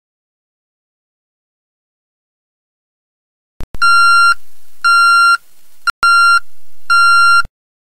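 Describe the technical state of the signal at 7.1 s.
At 7.1 s the signal is inside a stretch of channel delay, which produces comb filtering. It runs from 6.37 s to 7.79 s. One channel arrives late by around 1.5 ms, and the two channels are folded to mono. Content shared by both then cancels at evenly spaced frequencies. The first notch sits near 300 Hz. The result is a hollow, phasey tone with fixed notches across the spectrum.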